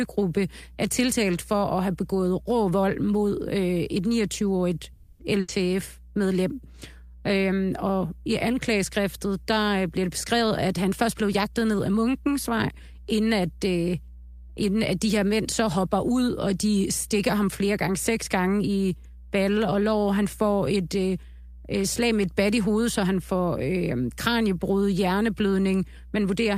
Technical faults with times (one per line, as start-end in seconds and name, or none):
0.00-26.57 mains hum
4.93-5.21 call audio freeze
5.40-5.50 burst of packet loss
10.08-11.95 jitter buffer speed-up